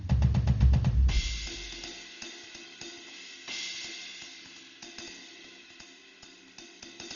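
From start to finish the music is dull and band-limited, with a rough, fluttering noise clinging to sustained tones. The pattern points to heavy Dolby Digital compression at a very low bitrate, consistent with about 32 kbps, likely the cause. The encoder cuts everything above 6.9 kHz and leaves many frequency lines without detail, filling them with dither noise. A spectrogram shows a hard ceiling at 6.9 kHz and speckled, grainy smearing around harmonics.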